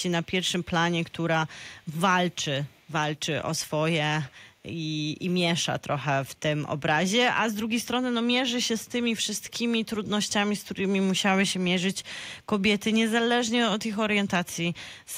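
Echo leak at 1.79–1.95 s, 2.69–2.91 s and 9.48–9.53 s: faint 368 ms-delayed scraps of speech, likely loudspeaker pickup an echo canceller missed.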